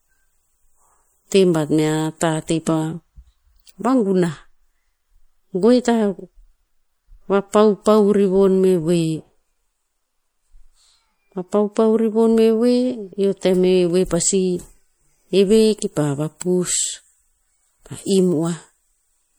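A speech recording runs with plainly audible codec damage from start to finish. The sound has a watery, swirly texture. The likely cause is MP3 compression at a low bitrate, which fits roughly 64 kbps. MP3 divides the sound into many narrow frequency lines. With too few bits, the encoder drops the weaker lines. They then switch on and off from frame to frame, which creates the swirl. Sharp onsets also smear.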